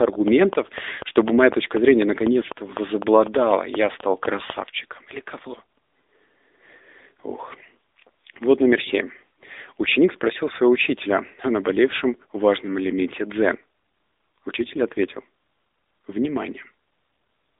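From start to finish the speech carries AMR narrowband mobile codec damage, plainly audible as a buzzy, synthetic voice that fits a low rate near 8 kbps. A spectrogram shows energy confined to roughly 250 Hz to 3.7 kHz, with nothing above 3.7 kHz.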